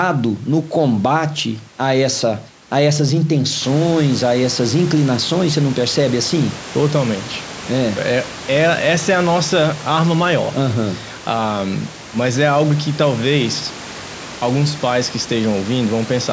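No technical faults can be heard in this speech recording.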